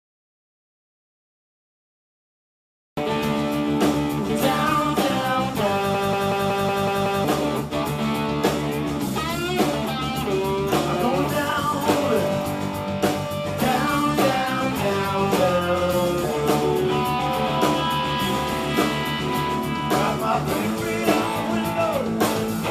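From 1.49 to 2.97 s and again from 5.94 to 7.25 s, a system hang loop replays one 186 ms slice (fitting an 8192-sample buffer) at 5.38 Hz, a machine-gun stutter costing about a second and a half of audio each time. On a waveform or spectrogram it appears as identical blocks tiled side by side.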